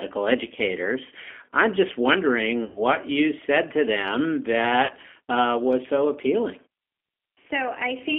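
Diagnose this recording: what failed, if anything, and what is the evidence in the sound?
The G.729 codec stage shapes the whole recording: speech is confined to about 300 Hz–3.4 kHz and sounds rough and synthetic. Unlike plain band-limiting, the roughness points to 8 kbit/s model-based coding.

VoIP packet loss concealed by the speech codec occurs at 2.64–2.82 s and 4.85–4.92 s. The decoder stretches the last sound into a fading buzzy tone or coloured noise that recovers slowly, unlike a clean dropout to silence.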